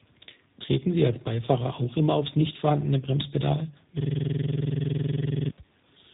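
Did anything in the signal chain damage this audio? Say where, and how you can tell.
Yes, at two stages.

Across the whole clip the speech sounds rough, muffled and warbly, with nothing above about 3.8 kHz. This is tandem speech coding in the call path. The signal went through a CVSD link, then G.711 A-law, then G.729A, so it was decoded and re-encoded at each border. The second speech codec, G.729A, had to model CVSD's already degraded output, and their errors stack. The result sounds worse than either codec would on its own.

From 4.00 to 5.5 s the audio locks into a rapid, rattling stutter. It is one 46.44 ms fragment repeating exactly, about 32 times, at 21.5 Hz. This is a system hang loop at the driver or buffer stage. The host froze while the audio hardware kept replaying the same ring buffer, and the loop length fits a 2048-sample buffer.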